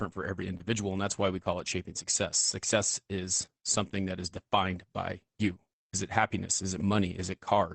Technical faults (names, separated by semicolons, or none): short concealed packet loss; lost packet rebuilt from error correction